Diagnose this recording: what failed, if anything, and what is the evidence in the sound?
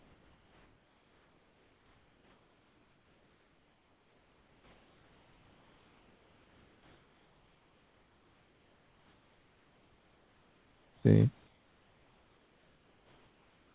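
Comfort noise in place of the background, 0.0 to 11.03 s and 11.47 to 13.74 s: pauses carry a steady, featureless hiss about 4 dB quieter than the room. This is likely discontinuous transmission in call processing, with the receiver synthesising noise while the sender stayed silent.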